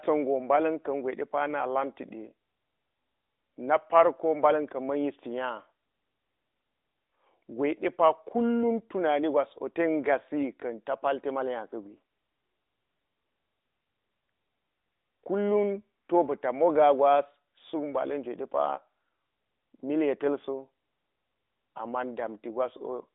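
No technical faults can be heard anywhere in the recording. The speech comes over an AMR narrowband mobile codec path, confined to a telephone band of about 250 Hz to 3.7 kHz with nothing above 3.8 kHz, and the light synthetic coloration fits the codec's top 12.2 kbps mode.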